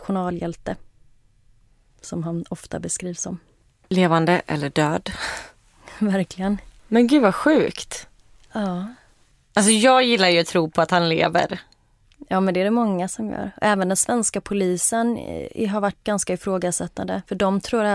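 Nothing in the recording stood out as a technical problem on listening.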